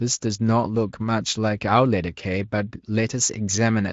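Nothing goes wrong anywhere in this bit of speech, and the Speex coding it passed through sounds like it ran at a generous, high-quality setting, leaving at most a faint trace.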